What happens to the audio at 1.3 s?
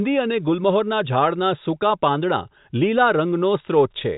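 Nothing goes wrong at 1.3 s: the speech carries on intact through that moment, with only the steady narrowband character of G.711 telephone coding, which passes nothing above about 3.8 kHz.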